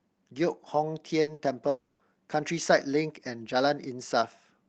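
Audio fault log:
1.21–1.30 s and 1.33–1.42 s, burst of packet loss: Two short runs of packets went missing within a fraction of a second, so the receiver stretched the last received speech into each gap for about 60 ms. Each gap comes out as a brief, fading held buzz or hiss, and the speech resumes with about 60 ms skipped.
1.69–2.02 s, long network dropout: Audio stopped arriving for about 0.33 s, likely because of a network stall. The receiver kept extending the last sound across the whole gap instead of falling silent, so a fading buzz or hiss fills it, and speech returns with that stretch missing.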